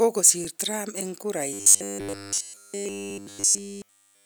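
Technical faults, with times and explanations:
0.45 s and 3.10 s, repeated buffer: a very short slice of audio about 2.67 ms long, which fits a 128-sample buffer, plays again, twice more at 0.45 s and once more at 3.10 s. Almost nothing is skipped, so the effect is a tiny click or brief buzz rather than a stutter. On the waveform, identical short segments sit side by side with a hard step at each join. A spectrogram shows a thin vertical broadband line.
1.53 s to the end, robotic sound from repeated short buffers: the speech becomes a rigid, metallic buzz that still roughly follows the syllables. The likely cause is that fresh audio arrives too seldom and the last chunk, about 10 ms long, is looped in its place, with essentially all of this stretch made of repeats. Looping imposes a fixed 100 Hz buzz. A spectrogram shows flat, evenly spaced harmonics at multiples of 100 Hz, and the waveform repeats every 10 ms.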